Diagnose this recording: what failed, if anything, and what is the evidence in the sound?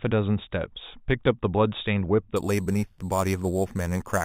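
From 2.36 s to the end, a bright metallic fizz sits on the speech about 18 dB down, filling 4 to 8 kHz. That's imaging from sample-and-hold upsampling at rate conversion. Samples were repeated without smoothing, which points to 8 kHz audio pushed to 44.1 kHz.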